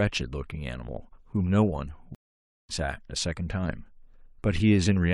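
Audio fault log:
2.15–2.71 s, stream reconnect: the speech drops out for 540 ms, then picks up again at a later point, so roughly 0.4 s of material is simply skipped rather than delayed. The connection broke, the player fell silent while it re-established the link, and a fresh decoder joined the live stream mid-flow, which is why nothing is repeated. The first moments after the gap come in faded in as the new decoder settles.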